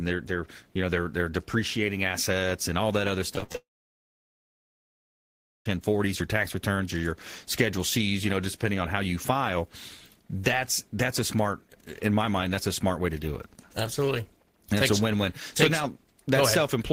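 Right after "and all that other", from 3.35 to 3.55 s, the speech breaks into repeated packet loss with a robotic, choppy texture. Five short gaps, the longest about 61 ms, are each bridged by stretching the preceding sound, so just over half of that 0.2 s is synthetic fill. Unlike a single dropout, the holes come in quick succession, which gives a choppy stutter rather than a clean cut.

From 3.55 to 5.75 s the sound collapses into a long network dropout. A brief continuation of the last sound fades out, and then about 2.0 s of silence follows before speech resumes at "your tax returns or". The cause is likely a sustained loss of incoming audio rather than scattered lost packets. It is set apart from the choppy stretch before it by one continuous hole instead of many small ones, and the speech from that span never returns.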